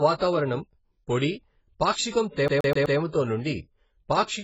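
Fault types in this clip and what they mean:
AAC compression: Throughout, the speech sounds dull and muffled, with nothing audible above about 7.7 kHz and a smeared, warbling, fizzy texture on sustained sounds and sibilants. The likely cause is heavy AAC-LC compression at a very low bitrate, which fits something around 16 kbps. To save bits, the encoder drops the top of the spectrum and quantises the remaining frequency bands so coarsely that the detail turns to a wobbling wash.
Pre-echo: A brief hiss comes just before sharp onsets, once at about 1.92 to 1.96 s and again at about 4.23 to 4.28 s, and each attack sounds softened. In each case the noise spreads back roughly 45 ms ahead of the attack. A transform codec spreads its quantisation noise across a whole block, so noise sized for the loud attack leaks into the quiet moment just before it.
CD stuck on one turn: From about 2.48 to 2.98 s, the audio stutters rapidly and evenly. 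The same short fragment, about 126 ms long, plays four times in a row before the sound moves on. This is the classic skipping-CD effect, where the laser jumps back one track at the same point on each turn of the disc. Because of that, an identical slice of audio repeats at a steady rate.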